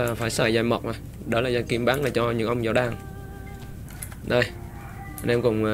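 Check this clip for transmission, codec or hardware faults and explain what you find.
No faults found; the signal holds steady throughout, with nothing that calls for explanation.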